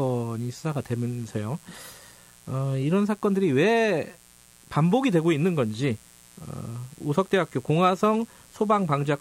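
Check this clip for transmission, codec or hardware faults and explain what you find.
One hardware fault is present: mains buzz. It runs through the whole speech clip. A 60 Hz supply is leaking in as sharp switching spikes, two per cycle. Their harmonics climb into the kilohertz range. The result is a steady, raspy buzz, roughly 30 dB below the speech.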